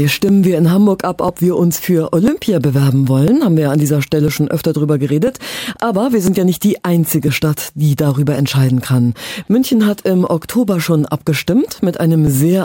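From 0.29 s to 12.27 s there are periodic USB or driver dropouts, recurring every 1.0 s, about a dozen or more in all. At each one, something briefly stalls the USB link or audio driver and roughly a couple of milliseconds of audio is skipped outright, so the waveform jumps to a later point. Each jump produces a short, regular tick or pop, audible only where sound is present.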